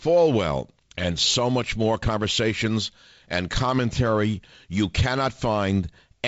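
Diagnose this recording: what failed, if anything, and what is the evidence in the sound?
Nothing failed; the wideband telephone coding works as intended.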